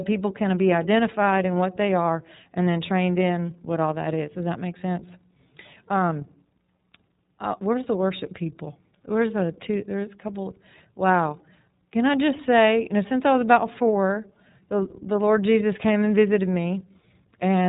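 Throughout, the speech sounds muffled, slightly rough and synthetic: the iLBC codec discards everything above 4 kHz and codes each 30 ms frame independently, consistent with its 13.33 kbps mode.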